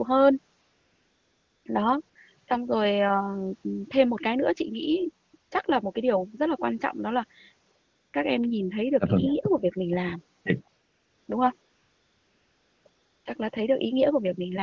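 Between about 0.61 s and 13.25 s, nine pauses in the speech are filled with AMR comfort noise. The phone judged the talker silent, stopped sending speech frames, and the receiver synthesised a smooth, steady hiss from a coarse level and spectrum estimate. The fills run from 40 ms to 1.24 s, the longest at 11.61 s. Unlike a noise gate's dead silence or a dropout's clicky gap, the real background is swapped for this featureless noise, switching in and out.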